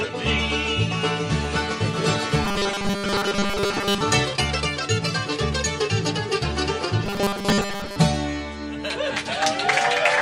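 From 2.45 to 4.01 s and again from 7.05 to 7.96 s, robotic sound from repeated short buffers: a rigid, metallic 200 Hz buzz, likely from a roughly 5 ms stretch looping while the real audio is skipped. Unlike hum, it follows the sound's shape.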